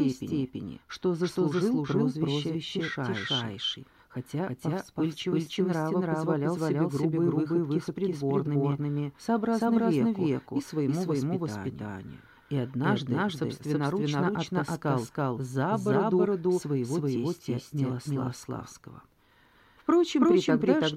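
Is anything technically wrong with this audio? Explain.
Yes. A doubled audio track runs throughout. A second, equally loud copy trails by about a third of a second, likely from a slower capture path or misaligned edit.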